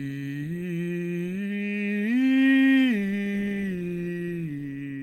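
Nothing in the music stood out as a fault on listening.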